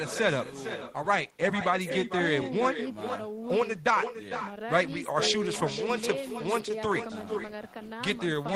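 From start to finish, echo with no canceller: the far end's loudspeaker feeds its microphone, returning each phrase about half a second later, roughly 10 dB quieter and thinner.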